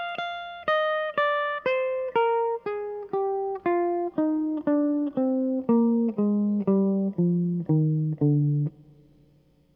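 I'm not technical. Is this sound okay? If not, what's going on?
Yes, nothing in this music stood out as a problem when I listened to it.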